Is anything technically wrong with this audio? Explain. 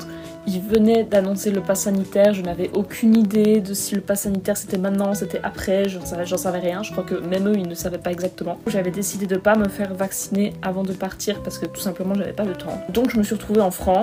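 Yes. Periodic USB or driver dropouts run from 0.15 s to 13.95 s: every 0.1 s, a background task stalls the audio path and a fraction of a millisecond is replaced by silence. The result is a steady 10 Hz ticking, audible only while sound is present.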